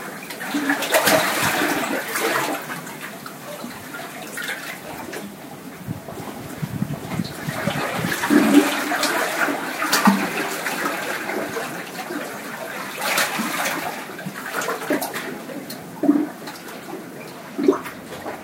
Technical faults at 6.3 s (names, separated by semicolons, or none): doubled audio track